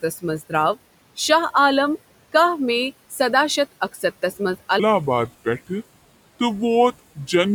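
At 3.93 s, just after "میی سداہ شتھ", the noise suppressor mistakes a stretch of speech for background noise and pulls it down along with the room noise, which sits about 21 dB under the speech. This speech cut by the noise suppressor lasts about a tenth of a second, to 4.03 s, and the level falls by up to about 10 dB, so the sound there comes through swallowed and faint.

From 4.80 s to the end of the clip, a section plays at the wrong speed, most likely because an editor or player fitted it to a mismatched clock. It runs at 0.75 times the original rate, so the audio drags noticeably slower, and the pitch drops with it by roughly five semitones. The change sets in abruptly rather than gliding, leaving the closing speech deep and sluggish.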